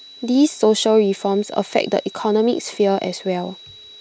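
Throughout the speech runs a switching supply whistle, a thin high tone sitting around 4 kHz and wandering slightly between 3.88 and 3.93 kHz. A power converter is cycling at an audible rate, leaking in roughly 25 dB below the speech.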